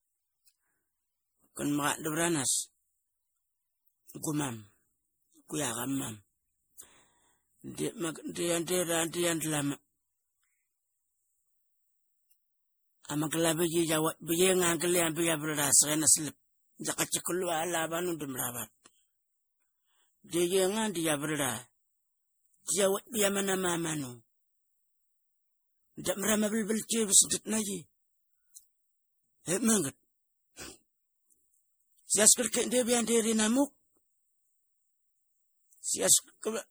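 From start to finish the speech has a swirly, hollow, smeared quality, with consonant attacks blurred. That's generation loss, likely from lossy re-encoding about five times over, each pass requantising on a shifted frame grid, stacking noise and spectral holes well beyond what a single 64 kbit/s MP3 would leave.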